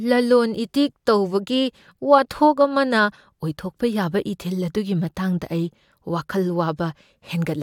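No technical faults can be heard anywhere in the recording. There is nothing to place on a timeline.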